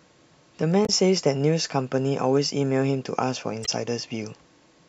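Damaged data in a compressed stream appears twice in this speech, from 0.85 to 0.89 s and again from 3.63 to 3.69 s. In each spot a short run of the encoded bytes was corrupted, so the decoder misread those frames, lost its place in the stream and had to hunt for the next valid frame header. The result is a brief synthetic chirp or blip of about 40 ms and 60 ms in the speech.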